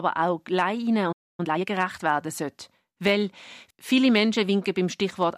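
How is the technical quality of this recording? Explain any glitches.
Two linked playback glitches mar the speech near the start.

From 1.12 to 1.40 s the speech cuts out mid-flow and leaves about 0.26 s of silence before resuming. This is a playback stall, likely the player running short of buffered data or its output thread being held up, so nothing reached the output.

From 1.40 to 1.66 s the speech sounds rushed but keeps its normal pitch. This is time-compressed catch-up: the player clears the backlog left by the stall by removing small slices and cross-fading the joins, playing at roughly double speed.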